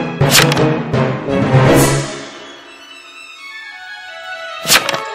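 From 0.21 to 1.04 s the signal is driven roughly 14 dB beyond what a stage in the chain can pass, so its peaks are sliced flat. This hard clipping piles harmonics high into the spectrum, giving a harsh, buzzing fuzz across every loud moment.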